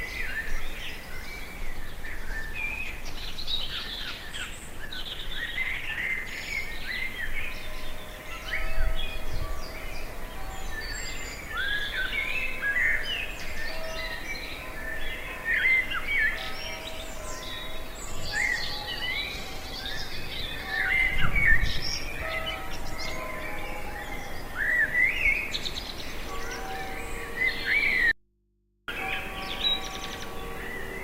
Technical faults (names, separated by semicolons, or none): call bitrate drop; audio dropout to a faint residue